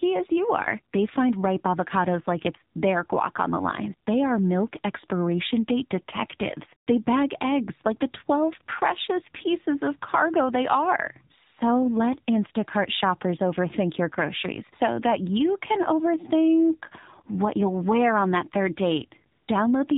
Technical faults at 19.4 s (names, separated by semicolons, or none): AMR narrowband mobile codec; AMR comfort noise